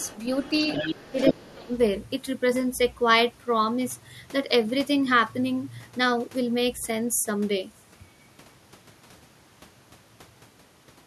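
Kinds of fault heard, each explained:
Other side's voice leaking through: A second voice is audible under the speech, faint from 0.00 to 0.19 s, then nearly as loud as the talker from 0.38 to 1.53 s. This is likely loudspeaker playback reaching the microphone and not fully removed by the echo canceller.
Speech suppressed in double talk: Between 1.11 and 1.72 s, while the leaked voice overlaps, the talker's level dips by roughly 20 dB across about half a second. The likely cause is the echo canceller attenuating both voices when it cannot tell them apart.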